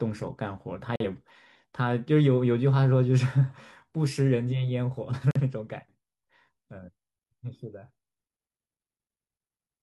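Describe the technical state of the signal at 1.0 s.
At 1.0 s you're right inside a corrupt frame muted dropout, running from 0.96 to 1.05 s. A couple of compressed frames arrived damaged, the decoder rejected them, and the player filled the gap with silence, so the speech cuts out abruptly for about 90 ms, then resumes on time.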